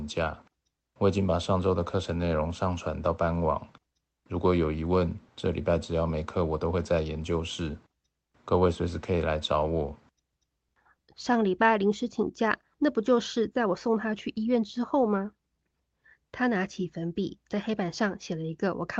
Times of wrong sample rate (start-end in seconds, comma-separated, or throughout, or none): none